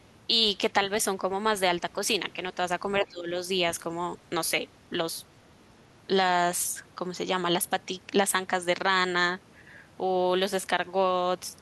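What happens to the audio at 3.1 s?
The speech dips sharply, by around 20 dB, from 3.03 to 3.3 s. This is speech suppressed in double talk, likely an echo canceller turning down both talkers at once.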